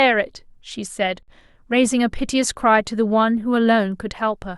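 A speech recording with a gap at a join of encoded pieces. From 1.23 to 1.28 s, a gap of about 52 ms opens in the sound. It then resumes where it stopped. The edges are smeared. Two separately encoded segments were joined untrimmed, leaving encoder delay and end padding.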